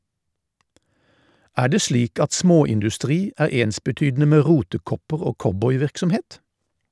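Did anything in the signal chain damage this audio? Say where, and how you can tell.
No, nothing in this speech recording stood out on listening as damage from any stage of the signal chain.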